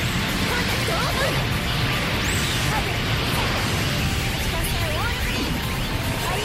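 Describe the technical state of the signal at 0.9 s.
At 0.9 s the signal is intact, with no audible fault at that moment.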